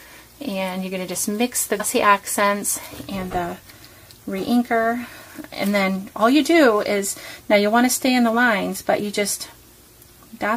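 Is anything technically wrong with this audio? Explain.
Yes, there is one fault. Damaged data in a compressed stream occurs at 1.79 s. At that point the encoded stream holds corrupted bytes, so the decoder cannot read the affected frame correctly. It loses its place in the bitstream and must find the next valid frame header before normal decoding can resume. That brief breakdown is heard as a short, sharp blip or chirp that cuts across the sound for a fraction of a second.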